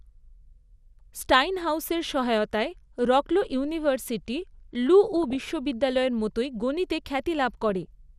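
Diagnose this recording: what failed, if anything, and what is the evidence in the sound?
The codec stage is the likely source of the damage heard throughout: MP2 compression at a low bitrate, which fits something around 80 kbps. Layer II splits the speech into 32 sub-bands and hands out bits per band, and here there are too few. Upper bands drop out and flicker back, and the remaining ones are coarsely quantised. The result is a dull top end with a granular, gurgling roughness that is plainly audible across the whole recording.

The second failure is at the reception stage: DAB burbling, where bit errors slip past error correction into the MP2 data. It happens twice, from 5.17 to 5.42 s and from 7.69 to 7.86 s. Corrupted samples put short blips of noise into single sub-bands, and corrupted scale factors make sub-bands jump in level for up to a frame, producing burbling laid over the speech. 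Each burst spans what sounds like about a dozen frames, consistent with a small error rate well under one percent.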